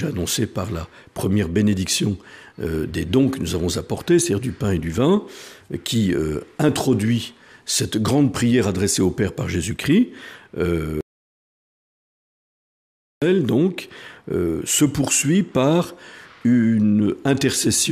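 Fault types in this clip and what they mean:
Audio dropout to silence: the signal cuts off abruptly at 11.01 s and returns at 13.22 s, leaving a gap of about 2.2 s that is silent, with no room tone or noise floor underneath. Sound stops mid-flow and resumes mid-flow, so whatever occurred in that span is missing. The likely cause is a loss of input upstream, such as a disconnected device, a broken link or an accidental mute, while recording continued writing silence.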